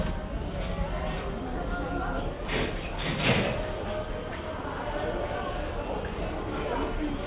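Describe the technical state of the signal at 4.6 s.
From 4.61 to 4.64 s the sound gives way to a 30 ms patch of steady comfort noise, likely sound dropped by the voice detector, which mistook the sound for background.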